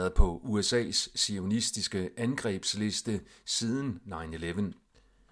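No technical faults can be heard anywhere in this speech recording. Nothing in it calls for a timestamp or a note on how the signal was handled.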